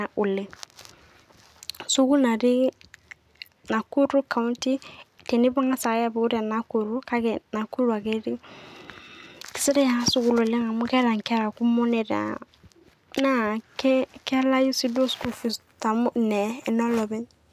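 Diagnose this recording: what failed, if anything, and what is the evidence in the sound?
Nothing failed in this recording, and the sound gives no evidence of any fault at any stage.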